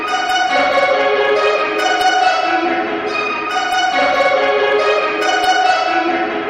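Hard clipping runs through the whole clip. The signal is driven about 4 dB past the ceiling of a stage in the chain, so whenever a peak reaches that stage's limit it is sliced flat rather than rounded. Only a small fraction of samples, well under one percent, actually hit the limit. The damage is therefore confined to the loudest moments, where the squared-off tops add high-frequency harmonics heard as brief crackle and grit on peaks rather than a continuous fuzz.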